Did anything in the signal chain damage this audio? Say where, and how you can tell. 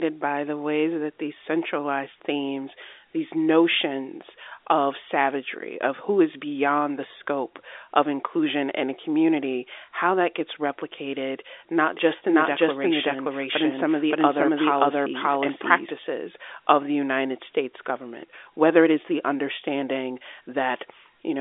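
Yes. Between 11.97 and 15.91 s, just after "that gets replicated not", there is a doubled audio track, most likely from the mix stage, where a second, slower capture path or an edit left two copies out of step. A full-band duplicate of the speech trails the original by about half a second at roughly the same level. It has no decay or room colour, and it starts and stops abruptly, all within the same telephone band as the G.711 line.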